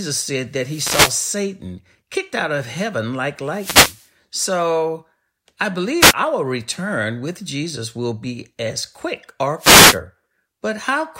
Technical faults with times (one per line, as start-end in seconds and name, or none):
0.56-1.45 wireless microphone noise hit
3.47-4.11 wireless microphone noise hit
6.00-6.14 wireless microphone noise hit
9.57-10.01 wireless microphone noise hit